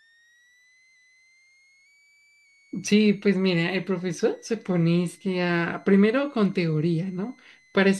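Speech, with a switching supply whistle running under it from start to finish: a thin high tone wandering between about 1.7 and 2.3 kHz, centred around 2 kHz and sitting roughly 35 dB below the voice, where a power supply's burst-mode switching has dropped into the audible range.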